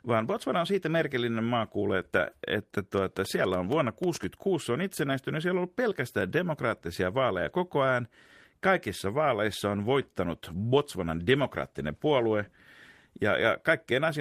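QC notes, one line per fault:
2.98–4.24 s, train of clicks: about ten sharp ticks at roughly 6.4 per second with irregular spacing, peaking about 5 dB above the speech and audible in gaps too. Likely cause is interference from nearby equipment or a faulty connection or power supply.
10.35–13.65 s, call bitrate drop: the encoder's rate fell from 32 to 17 kbps and stayed at its lowest for 2.24 s. With fewer bits the codec quantises the speech more coarsely, so it turns rougher and more watery until recovery.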